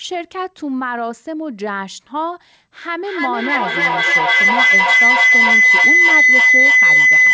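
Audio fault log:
2.81 s to end: feedback howl. A tone near 2 kHz builds from here to about 11 dB above the speech, with the loop repeating roughly every 0.3 s. The microphone-to-loudspeaker loop gains level each pass, so repeats grow and narrow to the loop's favoured frequency.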